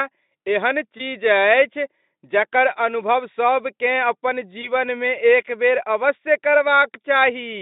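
At 0.97 to 1.01 s the speech briefly smears. It turns thin, then recovers. That is VoIP packet loss concealed by the speech codec. A packet went missing, and the decoder filled the gap by repeating its last pitch and spectral shape at falling level. The gap fits a single lost 20 ms frame. The same happens at 4.61 to 4.69 s. There the damage lingers longer, because the decoder's memory needs time to resettle after packets return.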